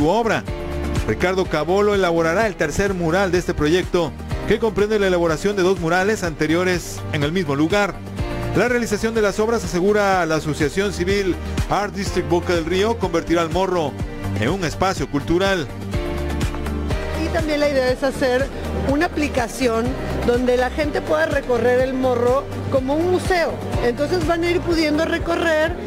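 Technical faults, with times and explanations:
2.39–3.06 s, drift correction step: The audio suddenly runs about 6% fast and rises about one semitone. Speed and pitch move together, then snap back after about 0.7 s. This is likely a clock-matching stage changing its playback rate in one jump to drain its buffer.
17.73–18.51 s, drift correction step: The audio now runs about 6% slow and drops slightly more than a semitone for about 0.8 s. It then returns to normal. This is likely the same correction in reverse, refilling the buffer.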